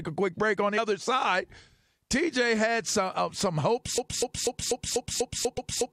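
At 0.77 s, damaged data in the compressed stream throws the decoder out of sync while it searches for the next valid frame, producing a brief glitch. From 3.98 s to the end, the stream likely stalled and kept resending its last fragment, creating a broken-record loop in which a 245 ms slice of speech repeats nine times back to back, and the speech that should have followed is lost. At 5.57 s, within that loop, a second patch of damaged data in the compressed stream adds another short blip.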